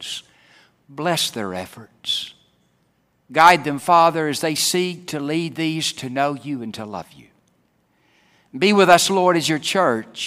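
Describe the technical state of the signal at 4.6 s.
Right after "as they" and before "seek to lead these", there is a brief jumbled moment from 4.56 to 4.58 s: the sound stumbles as two tiny pieces play in the wrong order. This is chunks out of order. One 10 ms chunk arrived late by a single chunk and was played after the one meant to follow it. Nothing is missing, but the swap leaves three hard joins inside those 20 ms.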